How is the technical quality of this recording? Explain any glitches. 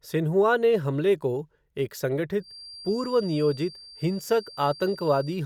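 The recording has one clear fault: a feedback whistle that begins at 2.37 s and continues to the end of the speech clip. A thin, steady tone at 4.7 kHz sits well under the speech, roughly 20 dB down, and swells and fades slowly in level. The likely cause is a loudspeaker-to-microphone loop hovering at the edge of feedback, sustaining that one frequency without building further. A spectrogram shows a narrow horizontal line at 4.7 kHz from 2.37 s onward. In the waveform it appears only as a faint fuzz between phrases.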